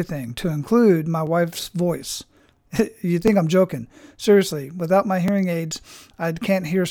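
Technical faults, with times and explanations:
1.27 s, 3.28 s and 5.28 s: overlapping chunks. The speech was handled in 2.0 s blocks, and each block begins about 7 ms before the previous one ended, so that sliver of sound plays twice at every join. The repeat causes a click or hitch, first just after "to include my", then just before "I'm joking", and last just after "without my", recurring at the regular 2 s spacing.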